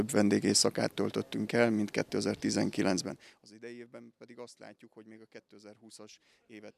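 From 2.98 to 3.54 s the level drops by roughly 25 dB in 1 dB steps, around fifty a second, with no smoothing between them. This is zipper noise: each step lands as a small click, producing a fast ticking that rides the fading sound.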